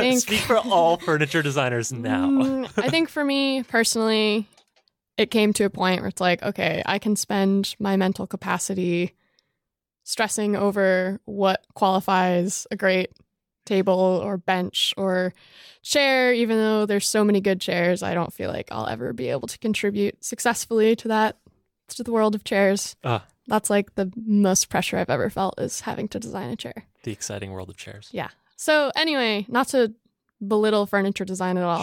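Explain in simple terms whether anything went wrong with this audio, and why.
Nothing went wrong here, since no faults can be heard anywhere in this speech recording.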